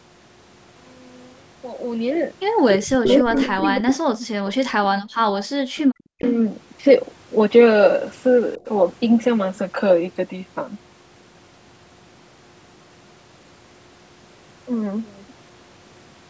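An echo leak turns up from 2.69 to 3.67 s: a copy of the talk trailing 284 ms behind, roughly 10 dB under the main level. It's likely a loudspeaker on the far end whose echo canceller didn't scrub everything. It returns as a faint blip near 4.49 to 4.55 s and again from 5.37 to 6.34 s at about 15 dB down.

Overlapping that, speech suppressed in double talk pulls the voice down by up to around 40 dB from 2.92 to 4.06 s, 4.76 to 5.25 s and 6.09 to 6.23 s, likely because the canceller couldn't separate the talker from the echo and squashed both.

Between 5.62 and 5.75 s, the background is gated by the echo canceller. It clamped the mic by about 38 dB for roughly 150 ms, so the room tone briefly drops out and then comes back.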